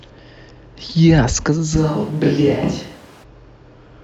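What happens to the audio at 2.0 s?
Speech turns abruptly roomy, hollow, quieter and thin in the bass from 1.78 to 3.22 s, likely a switch to a distant microphone.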